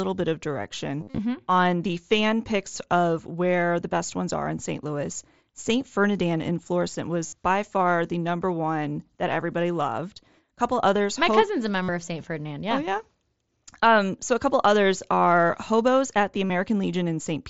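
Voice packets between headset and phone dropped out four times, and the receiver filled each gap by repeating the closest-matching stretch of recent waveform: concealed Bluetooth headset packet loss. From 1.00 to 1.18 s, after "bit of" and before "on the fan picks", losses scatter over 180 ms in runs up to 45 ms. Repairs of about 60 ms come at 7.26 s, before "by far the number", and at 11.82 s, and one of 45 ms at 16.46 s, after "at the". Each sounds like a brief buzzy, held tone with a slight warble as real audio resumes, through the mSBC link's light graininess.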